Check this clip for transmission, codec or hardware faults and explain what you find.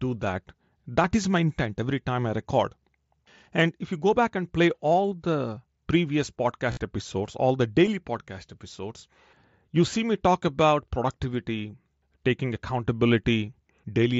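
The speech passes through a wideband Bluetooth headset link (mSBC, with speech up to 8 kHz and light graininess), and three dropouts are covered by packet-loss concealment.

Concealed Bluetooth headset packet loss occurs at 1.03 s just before "is my intent every", at 7.86 s between "episodes all the" and "podcast episodes", and from 6.71 to 6.77 s after "play all the previous". Each single gap is about 7.5 ms, which fits one lost headset frame, and both are nearly inaudible. The 6.71 s event loses 52.5 ms scattered over 60 ms, with a 45 ms run. The receiver fills each gap by repeating the closest-matching recent stretch of waveform, so that run is heard as a brief buzzy tone at steady level, then a slight warble as real speech resumes. On a waveform, the run appears as a flat, regularly repeating cycle. On a spectrogram, it shows as evenly spaced horizontal harmonic lines, ending in a small smear.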